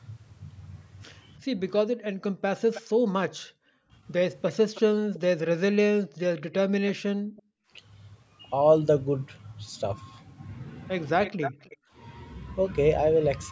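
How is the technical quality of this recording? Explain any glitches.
The recording has two recurring glitches, both from echo control on a loudspeaker call.

Background gated by the echo canceller, at 1.87–3.92, 5.89–6.18, 7.14–7.7 and 11.77–11.9 s: the canceller pulled the microphone down by up to about 40 dB, so the room sound briefly drops out.

Echo leak, at 2.74–2.82, 4.48–5.19, 6.52–7.42 and 11.23–11.77 s: a copy of the speech repeats 0.30–0.32 s later, some 10 to 20 dB quieter. This is likely loudspeaker pickup that the canceller left behind and sent back.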